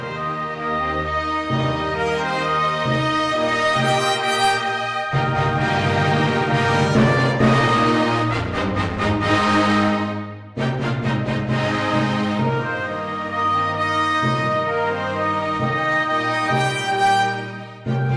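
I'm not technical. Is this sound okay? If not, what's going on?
Yes, this sound is okay, and nothing is going wrong in it.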